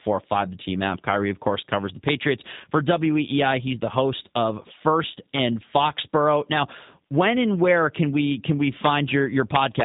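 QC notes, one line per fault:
throughout: G.729 codec. Nothing above about 3.8 kHz survives, and the speech has a rough, slightly synthetic grain, which fits an 8 kbit/s G.729A coder rebuilding each 10 ms frame from a vocal-tract filter, pitch predictor and a few pulses. Unlike plain low-pass filtering, the damage is in the texture itself: the voice sounds modelled rather than merely dulled. The damage is plainly audible.
2.08, 5.76 and 9.55 to 9.81: integer overflow. Three violent cracks on loud peaks. The first comes just after "of course covers the", driven about 2 dB past the limit. The second sits right at the limit. The last is a longer burst of about a quarter second, about 3 dB over. Each peak wraps to the opposite sign instead of being held, so the crack is far harsher and spikier than the flattened buzz of clipping.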